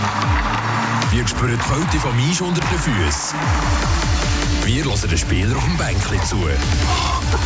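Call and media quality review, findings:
No audible faults found in this recording.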